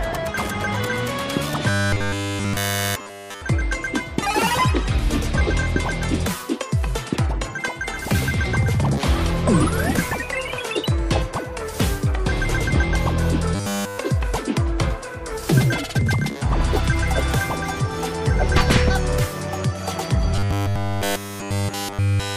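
Robotic sound from repeated short buffers occurs three times: 1.69 to 3.41 s, 13.55 to 13.98 s, and 20.36 s to the end. Each stretch turns into a rigid, metallic buzz with a fixed pitch of 100 Hz. That pitch fits a 10 ms block played over and over. The likely cause is audio arriving too seldom, so the last short buffer is repeated to fill the gap. Almost everything in these spans is repeated material, not new sound.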